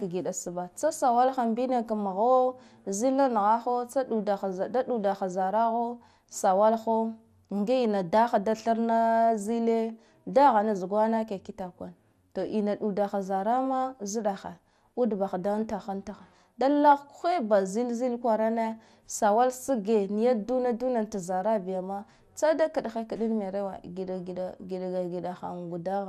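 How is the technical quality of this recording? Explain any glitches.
The technical quality is compromised: the speech has a dull, granular coding character throughout, and three short bursts of burbling break through it in the middle of the clip.

MP2 compression runs through the whole recording. The upper sub-bands drop out and flicker, and those left carry coarse quantisation, so the speech sounds muffled with a gurgling grain. This is likely MPEG Layer II coding at a low rate, around 80 kbps. It differs from burbling in being steady rather than eruptive: it simply never clears.

DAB burbling appears at 12.47 to 12.49 s, just after "zugwana ke kitakwane to"; at 16.80 to 16.97 s, between "untaha antaha da" and "ba zilzil kwarane sawala"; and at 19.69 s, just before "niya duna duna ta". Reception errors, a small fraction of a percent, slip past error correction and corrupt samples and scale factors over a few frames, so individual sub-bands jump in level. 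Each event is a brief burst of noise blips rather than the constant coding dullness.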